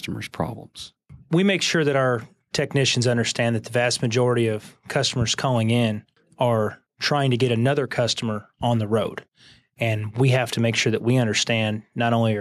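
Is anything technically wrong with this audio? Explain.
No, nothing technically wrong is audible anywhere in this speech recording.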